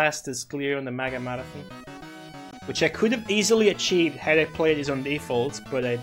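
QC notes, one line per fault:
2.50–2.54 s, damaged data in a compressed stream: a brief glitch lasting about 40 ms breaks into the sound. Corrupted bytes in the compressed stream leave the decoder misreading those frames and losing sync until it locks onto the next valid frame header.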